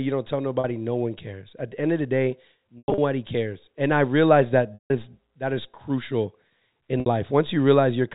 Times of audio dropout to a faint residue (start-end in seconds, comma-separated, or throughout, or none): none